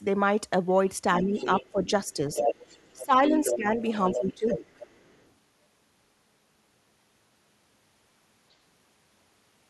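From 1.18 to 3.57 s, the other side's voice leaks through, only slightly quieter than the talker. An echo canceller likely left loudspeaker sound in the microphone. It returns, fainter, from 3.9 to 5.3 s. Meanwhile the talker's speech is suppressed in double talk at 1.23–1.84 s, 2.95–3.2 s, 3.51–3.8 s and 4.12–4.68 s. Their voice dips in short pieces, once sharply near 3 s. The canceller likely mistook it for echo.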